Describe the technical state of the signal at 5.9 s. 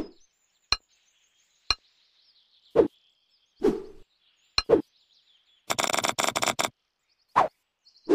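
A short glitch from 5.87 to 5.92 s comes from damaged data in the compressed stream: corrupted frames are misread and the decoder loses sync before recovering.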